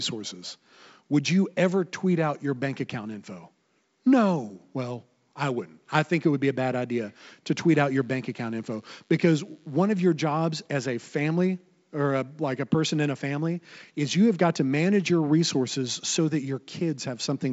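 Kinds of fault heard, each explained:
DECT cordless phone buzz: a thin, steady buzz rich in harmonics sits under the speech from 7.89 to 9.89 s, starting after "bad idea to tweet" and gone by "of your jobs as". Its 100 Hz rate matches a DECT handset or base station sending a radio burst every 10 ms close to the recording gear, where the audio circuit rectified the bursts into sound. It stays quiet, at about -40 dB relative to the speech, over the wideband telephone coding, whose band ends near 7.7 kHz.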